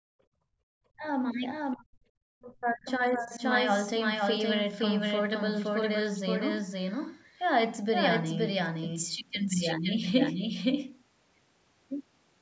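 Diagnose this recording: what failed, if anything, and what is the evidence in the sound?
The whole clip carries a doubled audio track: a second, full-band copy trails the first by about half a second at roughly the same level. It has no room decay or smearing, just a clean repeat, so you hear everything twice, flat and out of step. The most likely cause is in the capture or call-processing chain, with the same signal picked up a second time through a slower path, or an edit leaving two copies stacked out of alignment.

Right at the start, from 0.0 to 0.61 s, the background is gated by the echo canceller. The room tone drops out by as much as about 37 dB while the far end's loudspeaker is playing, then comes back once the canceller releases. That's the canceller clamping the microphone hard so loudspeaker sound doesn't leak back down the line.

There are also three stretches of speech suppressed in double talk: 0.89 to 1.05 s, 1.75 to 2.09 s, and the long one from 2.29 to 3.41 s. 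In each, the talker dips by roughly 40 dB or breaks up into pieces. The likely cause is both ends talking at once, so the echo canceller couldn't separate the near talker from the loudspeaker echo and attenuated both. The 8 kHz top end of the call path is just its normal bandwidth.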